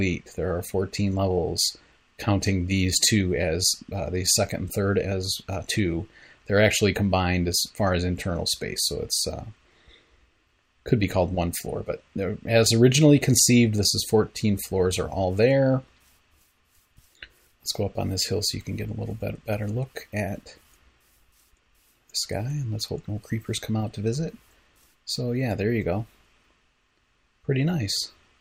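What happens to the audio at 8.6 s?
Nothing goes wrong at 8.6 s: the audio plays through that moment intact, with no dropout, click, glitch or other fault.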